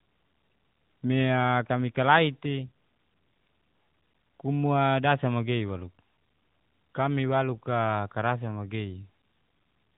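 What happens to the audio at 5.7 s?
Nothing goes wrong at 5.7 s: the speech carries on intact through that moment, with only the narrowband mobile codec's usual top limit, just under 4 kHz, that runs through the whole clip.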